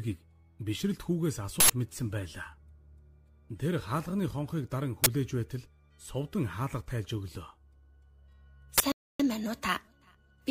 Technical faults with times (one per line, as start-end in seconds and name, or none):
1.60-1.70 uninitialised buffer
5.04-5.06 uninitialised buffer
8.78-8.80 uninitialised buffer
8.92-9.20 rebuffering stall